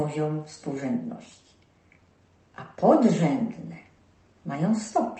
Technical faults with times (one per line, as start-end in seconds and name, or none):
none